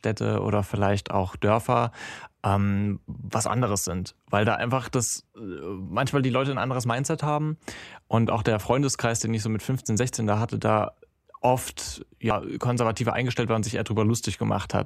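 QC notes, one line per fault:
12.30 s, damaged data in a compressed stream: corrupted bytes make the decoder misread a frame and lose sync, producing a brief glitch.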